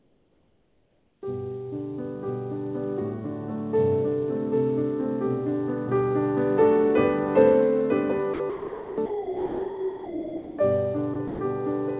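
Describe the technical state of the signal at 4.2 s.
At 4.2 s the signal is intact, with no dropout, glitch or distortion, just the narrow band of the WebRTC call path, which carries nothing above 4 kHz, as G.711 mu-law at 64 kbps would.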